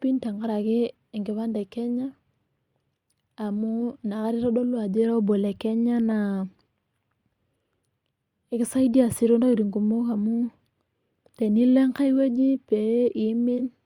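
At 13.58 to 13.60 s, near the end of the speech, there is a brief AAC frame loss with concealment. The missing stretch, about 43 ms and consistent with a single dropped frame, is patched from the previous spectrum, leaving a short smeared, noisy blip.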